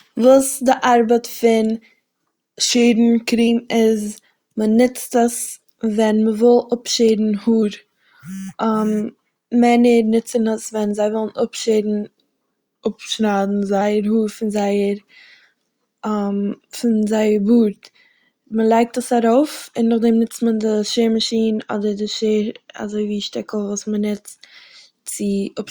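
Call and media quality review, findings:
Drift correction step, 2.70–3.47 s, 7.63–8.28 s and 12.32–13.81 s: speech drops about 6.4% slower and roughly 115 cents flat, a bit over a semitone, then snaps back. Likely the clock-sync resampler jumping its rate to rebalance the buffer.

Channel delay (comb filtering), 21.31–23.94 s: speech goes dull, top end thinned. One channel lags by a couple of samples, a few hundredths of a millisecond. The mono sum cancels around 10 kHz, so the first notch eats the air.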